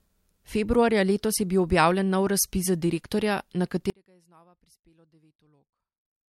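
At 3.9 s the speech drops out abruptly to a faint residue and stays that way to the end of the clip. Only a weak trace of the signal remains, about 35 dB down, likely from the wanted feed breaking while the downstream path stayed live.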